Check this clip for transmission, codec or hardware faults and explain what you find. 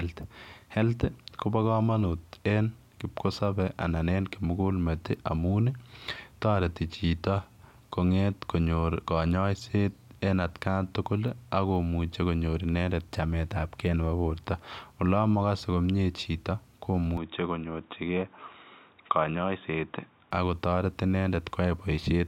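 One fault stands out: a switch of input to a poorer device. From 17.17 s to 20.31 s the speech suddenly turns dull and boxy. Nothing reaches above 3.8 kHz in that stretch. A faint new background noise sits well under the speech. The level holds steady, and there is no gap at either change. The likely cause is the system swapping to another microphone or a headset's call profile, whose narrower band and own noise then carry the signal.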